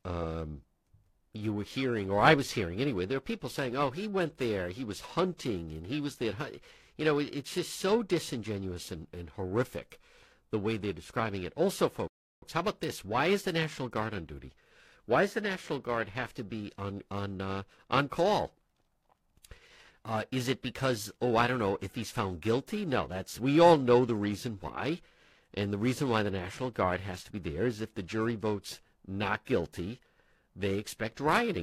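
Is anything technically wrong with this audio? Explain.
Yes, there are two faults. Periodic clock jitter runs through the whole clip: interference near 1 kHz shakes the converter clock, putting sidebands around every component of the speech, which gives it a rough, metallic edge that disappears in pauses. A rebuffering stall at 12.08 to 12.42 s occurs when the player runs out of downloaded audio and halts, leaving about 0.34 s of silence before resuming exactly where it stopped, at "how about this".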